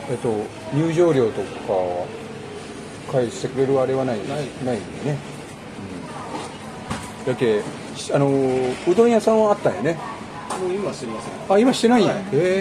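Nothing stood out as a technical problem on listening.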